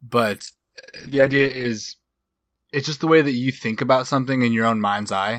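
A call bitrate drop begins at 0.41 s and lasts to the end of the clip. The call's bandwidth estimate fell, so the encoder was pushed to code the speech with far fewer bits. The sound points to a fall from around 64 kbps to about 8 kbps, with the lowest rate held for 1.26 s. Coarser coding makes the speech rough and watery, and the upper limit falls from 20 kHz to 8 kHz, leaving it muffled.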